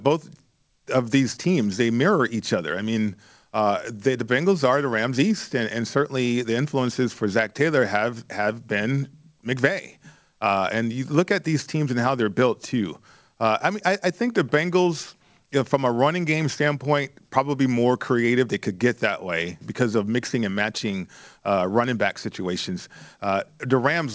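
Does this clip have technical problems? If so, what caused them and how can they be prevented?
No technical problems in this speech clip; it has come through a WebRTC call path, and the lack of content above 8 kHz fits a wideband codec such as G.722 running at 64 kbps, so there is nothing to prevent.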